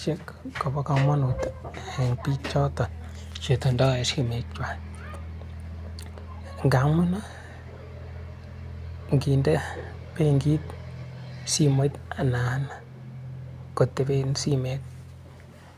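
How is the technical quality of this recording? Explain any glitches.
The recording has no audible technical problems.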